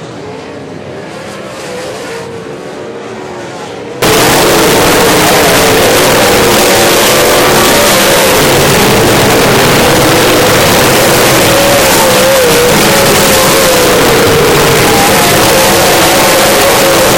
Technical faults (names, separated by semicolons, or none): float read as integer